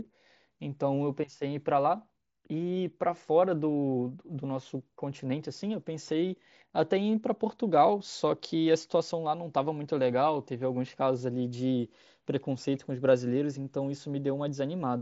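No technical faults are audible.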